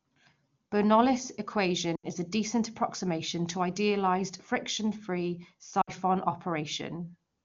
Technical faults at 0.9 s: none

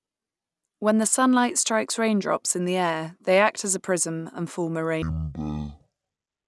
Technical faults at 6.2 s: wrong sample rate

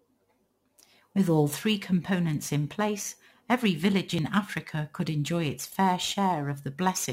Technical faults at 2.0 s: crude rate conversion

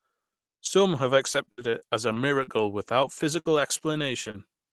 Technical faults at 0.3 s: none

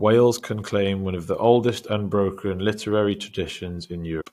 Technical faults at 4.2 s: damaged data in a compressed stream

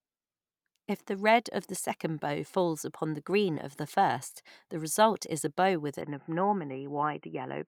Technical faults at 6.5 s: input switched to a poorer device

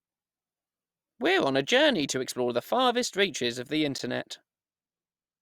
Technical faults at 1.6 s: none

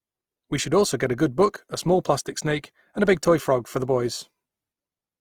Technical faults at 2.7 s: Opus compression

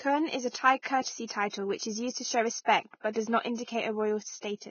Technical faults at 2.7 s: Vorbis compression

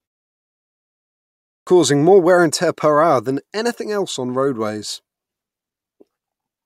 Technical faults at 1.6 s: clipped start after a pause

